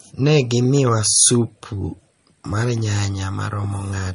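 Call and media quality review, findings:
Speech throughout: treble gone above 10.6 kHz, watery, swirly texture, smeared consonant attacks. Likely MP3 compression: bit-starved encoder cutting top band, weak frequency lines flickering frame to frame. Damage plainly audible, fits a low bitrate around 37 kbps.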